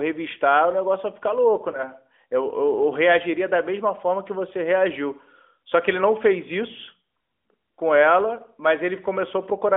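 Speech over an AMR narrowband mobile codec, with a line band of about 250 Hz to 3.5 kHz and nothing above 4 kHz on a spectrogram. There is one lost AMR speech frame at 1.72 to 1.81 s. A single 20 ms frame went missing, and the decoder covered it by repeating the previous pitch and vocal-tract settings at reduced gain, which produces a short dip or warble. On a spectrogram the harmonics and formants flatten into a held, smeared stripe, and the waveform shows a brief drop in amplitude before the speech recovers.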